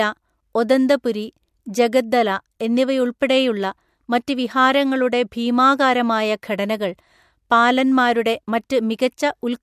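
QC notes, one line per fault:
No faults found.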